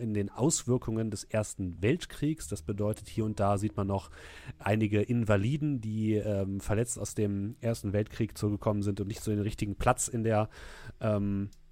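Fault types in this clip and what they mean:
Electrical switching spike: A switch, motor or static discharge close to the recording chain likely arced once and the audio line picked up the burst of interference. In this speech clip it shows as a single sharp snap at 2.94 s, laid on top of the sound rather than replacing it. It is brief and reaches only about -30 dBFS, so it reads as a small, hard tick rather than a loud crack.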